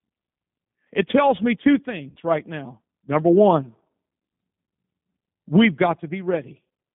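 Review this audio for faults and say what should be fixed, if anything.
The speech sounds thin, slightly rough and synthetic from start to finish, with the top end gone and the low end trimmed to a band of about 150 Hz to 3.6 kHz. That is the G.729 codec. Its sound points to the 8 kbit/s G.729A variant, which rebuilds each 10 ms frame from a vocal tract filter, a pitch estimate and a few pulses, leaving a plainly audible coarseness. To prevent this, carry the call on a wideband codec such as G.722 or Opus.

Between 2.10 and 2.19 s, just after "tells me two" and before "right now", the speech smears into a fading, stretched sound, and the voice comes back weak or distorted for a moment. This is VoIP packet loss concealed by the speech codec. About 60 ms of audio went missing, which fits two lost packets, and the decoder filled the gap by repeating its last pitch and filter at falling gain. 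Because each frame builds on the one before, the first frames after the gap stay damaged. To prevent this, improve the network path and use a jitter buffer or forward error correction.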